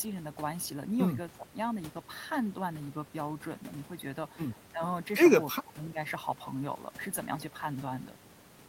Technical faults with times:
1.31-1.53 speech suppressed in double talk
4.72-4.82 speech suppressed in double talk
5.51-5.99 speech suppressed in double talk

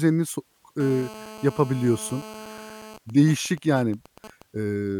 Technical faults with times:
0.80-2.97 GSM phone buzz
2.98-4.42 GSM signalling bursts

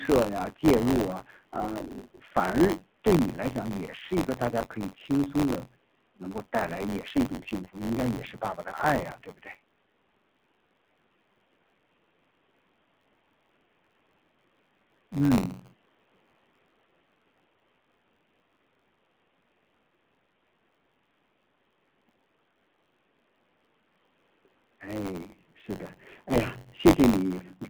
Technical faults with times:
0.00-27.69 AMR narrowband mobile codec
0.00-27.69 buffer tearing

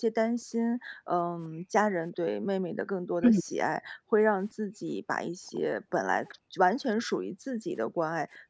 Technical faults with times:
0.00-2.91 background gated by the echo canceller
3.19-3.45 speech suppressed in double talk
3.79-6.60 background gated by the echo canceller
5.55-5.60 echo leak
6.30-6.34 echo leak
7.14-8.49 background gated by the echo canceller

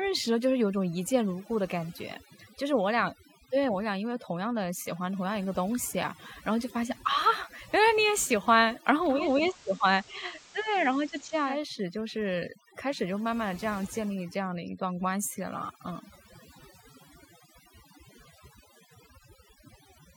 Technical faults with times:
0.00-20.16 overdone noise removal
9.09-11.62 digital radio blending to analogue

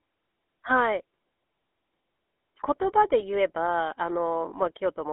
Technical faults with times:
0.00-5.13 GSM full-rate codec
3.20-3.52 GSM bit errors

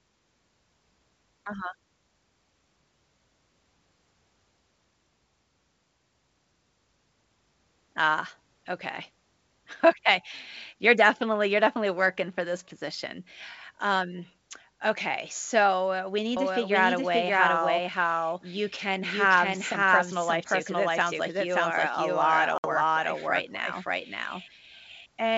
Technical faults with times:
16.37-25.37 doubled audio track
22.58-22.66 packet loss on an ADPCM call

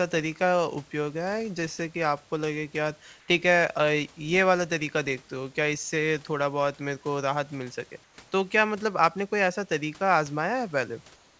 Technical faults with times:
3.20-3.28 comfort noise in place of the background
8.04-8.18 comfort noise in place of the background
11.16-11.39 comfort noise in place of the background

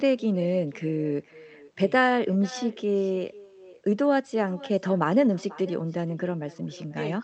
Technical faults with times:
0.00-7.24 echo with no canceller

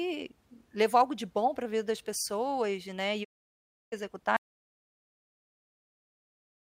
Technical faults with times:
3.23-3.94 digital broadcast dropout
4.36-6.67 audio dropout to silence

